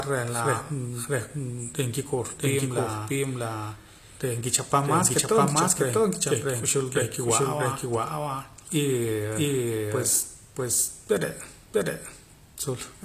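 Right from the start and all the way through, the speech has a doubled audio track: a second full-band copy trails the first by roughly 0.7 s at about the same level, with no decay or room colour. That's likely from a second, slower capture path or two out-of-step copies in an edit.

Also running throughout is plainly audible damage that's likely from HE-AAC compression, consistent with a low bitrate around 24 kbps. The treble is rebuilt from copied lower bands, so s sounds come out gritty and lispy, and nothing reaches above 14.9 kHz.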